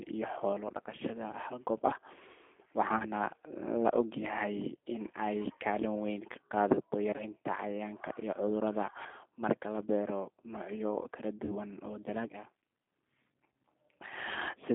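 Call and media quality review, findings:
G.729 codec damage throughout: narrowband, roughly 250 Hz to 3.5 kHz, rough synthetic speech texture. Fits 8 kbit/s G.729A, with its frame-wise filter and pulse excitation rebuilding the speech.

VoIP packet loss concealed by the speech codec at 2.98–3.04 s, 7.11–7.24 s (scattered gaps) and 11.45–11.57 s: buzzy or noisy fading smear as the decoder extrapolates its last pitch and filter, then weak recovery.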